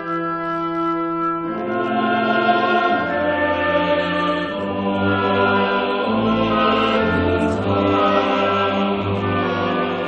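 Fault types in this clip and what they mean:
computer activity noise: A buzzing, scratchy layer runs underneath the sound for the whole clip, pulsing at around 70 times a second and sitting roughly 35 dB below the main signal. Its rhythm and texture track nothing in the audio itself. It comes from the computer's own work: as the processor, graphics card or mouse draw changing amounts of current, the shared ground of the audio circuit shifts, and those fluctuations leak into the recording as interference.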